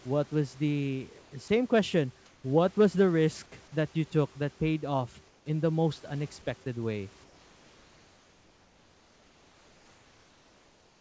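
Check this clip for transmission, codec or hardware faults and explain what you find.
Two transmission faults are audible, both tied to discontinuous transmission on a call link whose G.722 coding leaves nothing above 8 kHz.

Comfort noise in place of the background appears at 1.22–1.32 s after "what was the", 2.26–2.44 s, 5.28–5.46 s between "took that paid off" and "in the most unexpected", and from 7.24 s to the end. The real room noise, about 31–36 dB below the loud parts, gives way to a smooth, featureless hiss about 1–4 dB quieter. This is likely the receiver synthesising noise while the sender sent nothing. On a spectrogram the textured background turns into an even, grainy wash. On the waveform the noise floor steps down slightly.

Sound dropped by the voice detector occurs at 1.48 s, shortly after "what was the". For 20 ms the sound is replaced by the same flat noise. The likely cause is the detector treating a quiet stretch as background and stopping transmission. 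A spectrogram shows a thin vertical gap where the energy gives way to uniform noise. On the waveform it appears as a brief notch in the envelope.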